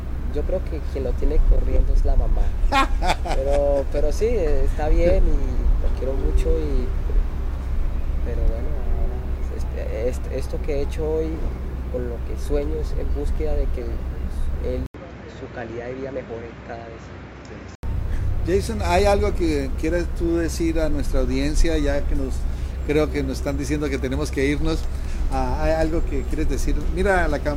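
At 14.86 s the sound drops out for 80 ms, then returns duller and about 5 dB quieter, with nothing above 7.6 kHz and a new background noise roughly 40 dB down. At 17.83 s it clears again. The likely cause is an input switched to a poorer device. A simple filter or EQ change wouldn't bring its own noise floor, level shift and switching gap, so the swap points to different hardware.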